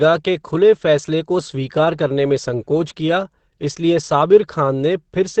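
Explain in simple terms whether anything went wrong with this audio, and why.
The speech was likely squeezed hard by Opus compression in its speech mode, so from start to finish it sounds muffled and hoarse, with nothing above 8.5 kHz.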